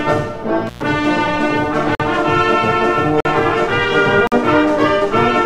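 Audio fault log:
0.67–0.82 s, intermittent contact: a loose connection opens for about 117 ms, so the sound drops out with crackle where the contact breaks and remakes.
1.95 s, 3.20 s and 4.27 s, block of digital silence: each time about 46 ms cuts to silence and back with no fade, which fits a 2048-sample buffer missing its deadline.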